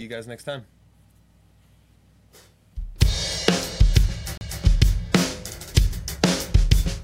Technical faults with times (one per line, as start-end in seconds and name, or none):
4.37-4.41 CD skip